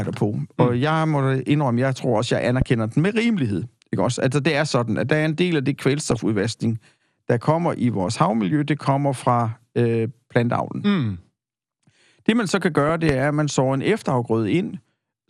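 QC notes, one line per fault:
Throughout: MP2 compression. The speech sounds dull and gurgling, with a granular roughness on the voice. This is likely from MPEG Layer II coding at a rate around 80 kbps, too few bits to keep all sub-bands, so upper bands drop out and what remains is coarsely quantised.
2.62 to 2.64 s and 13.09 to 13.12 s: loud pop. A single sharp pop sits about 15 dB above the speech each time. The first comes after "jeg tror også jeg" and before "den med", and the second comes just before "er at man sår". The talker carries on underneath. A sudden voltage step or pulse added to the signal, shaped by the following circuitry, is the likely source.
3.22 to 3.34 s, 6.01 to 6.19 s and 12.86 to 12.91 s: DAB burbling. There are short bursts of burbling blips, the first just after "den med" and the second the longest. Bit errors at a low rate have slipped past error correction into the MP2 data. 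Corrupted samples put short blips of noise in single sub-bands, and corrupted scale factors make sub-bands jump in level for up to a frame.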